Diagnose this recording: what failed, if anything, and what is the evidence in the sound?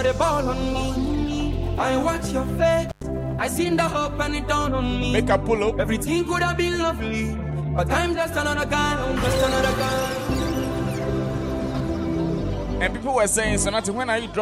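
A brief dropout with crackle at both edges, from 2.89 to 3.04 s, leaves only faint hiss for about 99 ms. This is an intermittent contact in the analogue wiring: a loose cable or plug opened momentarily, breaking the signal path before reconnecting.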